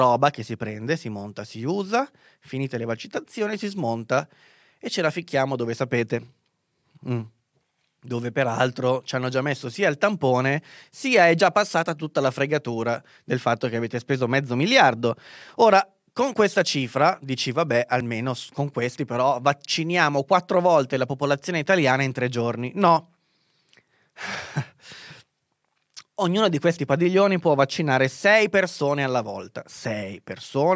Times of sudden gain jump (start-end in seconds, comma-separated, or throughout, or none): none